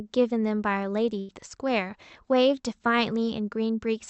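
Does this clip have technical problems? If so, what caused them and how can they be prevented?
Yes: a burst of packet loss from 1.19 to 1.31 s, where the receiver stretches and fades the preceding speech for about 90 ms, then resumes with roughly 100 ms skipped. Larger jitter-buffer headroom, forward error correction and a more stable network path would prevent it.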